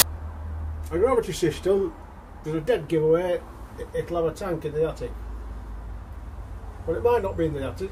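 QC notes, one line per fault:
0.0 s, file tags played as audio: right at the start there's a split-second blast of very loud white noise with hard edges. That's an embedded cover picture being read as samples, and since image data is compressed it looks random, so it plays as pure static.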